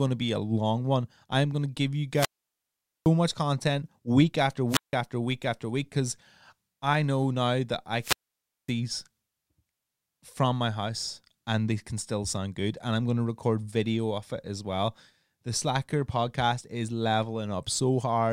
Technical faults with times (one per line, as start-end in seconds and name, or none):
2.12-3.12 wireless microphone squelch dropout
4.68-4.94 wireless microphone squelch dropout
8.00-8.73 wireless microphone squelch dropout